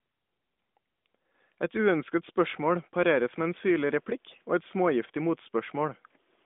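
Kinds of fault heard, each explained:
No faults heard in this clip.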